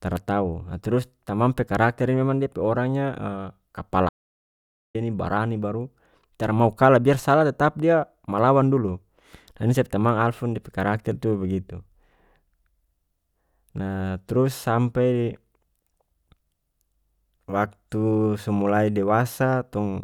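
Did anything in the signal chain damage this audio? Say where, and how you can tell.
Yes. An audio dropout to silence runs from 4.09 to 4.95 s: the speech stops mid-flow and about 0.86 s of silence follows, with no room tone, before resuming on "ini barani baru tara". The input stage likely lost its signal while recording continued.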